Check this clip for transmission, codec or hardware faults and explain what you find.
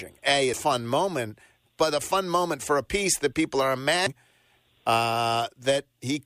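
Two brief codec faults are present, both from damaged data in a compressed stream, at 0.54 s and 4.07 s. Corrupted bytes make the decoder misread the affected frames and lose sync until it finds the next valid frame header, producing a short chirp or blip in the speech each time.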